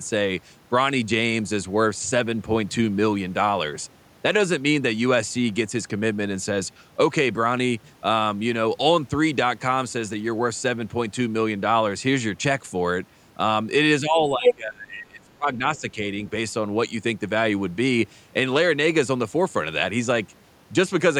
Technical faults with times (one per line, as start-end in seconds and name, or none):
14.00-15.97 speech suppressed in double talk
14.44-14.55 other side's voice leaking through
15.76-15.80 other side's voice leaking through